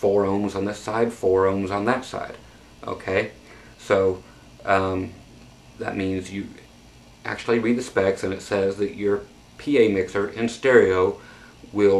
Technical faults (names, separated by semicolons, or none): none